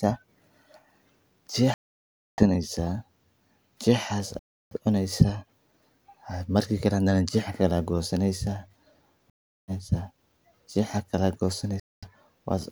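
The speech drops to silence four times, at 1.74 to 2.43 s, 4.39 to 4.76 s, 9.3 to 9.72 s and 11.8 to 12.06 s, then resumes further along as if it kept playing. That's likely a Bluetooth dropout, with late packets discarded.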